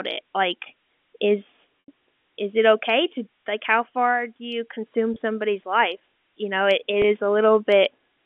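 A switching supply whistle runs throughout, near 4 kHz and about 30 dB below the speech. A power supply runs in an audible burst mode or beats with another one, giving a thin, high tone.

Packet loss with pitch repetition occurs at 1.80 to 1.88 s, between "it like is" and "is it okay to". The receiver repeats the last pitch period to bridge 80 ms, which fits four 20 ms packets, so the sound fades into silence and the speech returns with a short cross-fade. Shorter 20 ms gaps follow at 5.14 to 5.16 s, after "far do you consume", and at 7.02 to 7.04 s, after "you know it it".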